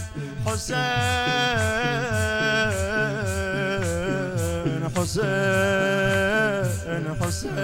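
No technical faults are audible anywhere in the clip.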